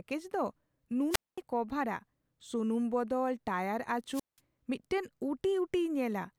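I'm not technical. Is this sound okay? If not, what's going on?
No. The speech cuts out twice, at 1.10 to 1.38 s and at 4.11 to 4.40 s, each time with a short burst of hiss and then near silence lasting about 0.22 s and 0.18 s. This is a wireless microphone squelch dropout: the radio link from the microphone weakened, and the receiver muted its output to hide the static until the signal came back and the speech resumed.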